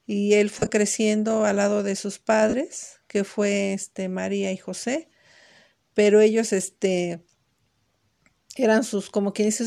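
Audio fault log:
0.59–0.70 s: lost LE Audio frames. Between "y él" and "creciendo al lado de", the speech breaks into a short hissy, smeared flutter. About 67.5 ms went missing in scattered gaps over 105 ms, the longest around 30 ms. The LC3 decoder filled each gap by repeating the last spectrum with random signs, which turns voiced tone into noise. The amount lost fits 7.5 ms frames.
2.50–2.54 s: lost LE Audio frames. After "al lado de sus" and before "que fue este", there is a 37.5 ms patch where the voice briefly dissolves into a noisy smear. The decoder concealed the missing frames by reusing the last spectrum with scrambled signs.
4.80–4.83 s: lost LE Audio frames. A brief 22.5 ms grainy blur interrupts the sound. The concealment copied the previous spectrum with random signs over the short gap. The gap is too short for it to fade toward silence.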